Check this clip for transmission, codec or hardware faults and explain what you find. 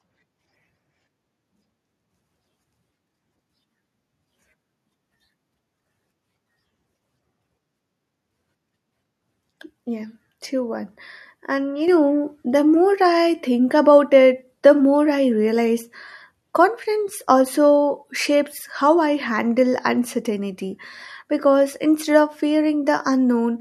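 One hardware-level fault is present: a microphone volume stepped up at 11.88 s. Automatic gain control in the calling software judged the input too quiet and raised the device's input level in a single step, so the speech and its background noise jump together by about 5 dB.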